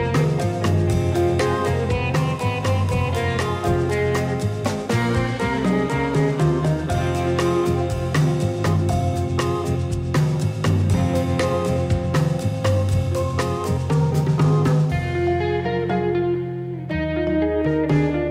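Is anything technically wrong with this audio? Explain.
No, nothing is technically wrong with this audio.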